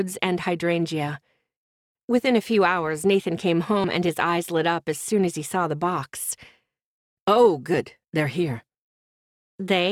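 The recorder likely drops roughly a tenth of a second between 4-second chunks, causing audio missing between chunks: abrupt skips at 3.84 s and 7.74 s, joined without silence.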